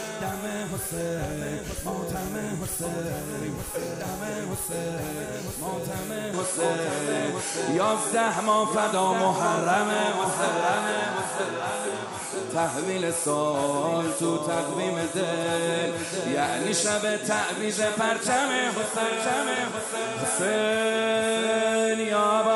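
At 6.34 s the sound abruptly narrows, losing everything above 11.4 kHz, shifts in level by around 5 dB and gains a new, faint noise floor, with no gap at the join. This is likely an input switched to a poorer device. Unlike a plain filter change, tone, level and background noise all change together.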